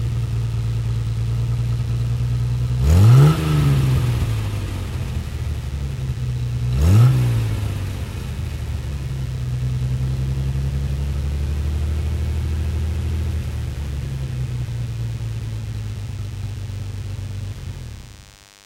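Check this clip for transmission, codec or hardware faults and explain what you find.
There is one fault, DECT cordless phone buzz, present throughout. A nearby DECT handset or base transmits a brief radio burst every 10 ms. The audio circuitry rectifies it into a 100 Hz pulse train. It sounds like a steady, thin buzz rich in harmonics, sitting well below the signal.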